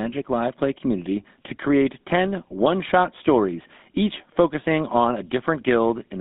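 Speech running through a GSM full-rate codec from start to finish, band-limited to roughly 200 Hz to 3.7 kHz with a buzzy, gravelly roughness, consistent with a 13 kbps link. The regular-pulse excitation's grit, not mere muffling, separates it from plain narrowband filtering.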